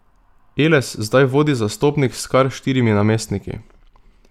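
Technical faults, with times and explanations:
No technical faults are present in this speech recording.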